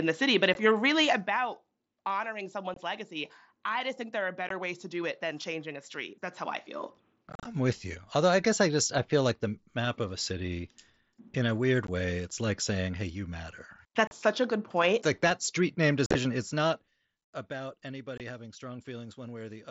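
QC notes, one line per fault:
0.54, 2.74–2.77, 4.49, 7.30–7.45, 11.87, 14.07–14.12, 16.06–16.15, 18.18–18.20 s: unconcealed Bluetooth headset packet loss. The speech has abrupt dropouts of 15 to 45 ms, with rough, chopped crackle at 7.30 and 16.06 where the gaps cluster. Short voice packets on the mSBC headset link were lost and silence or an idle pattern was left in their place.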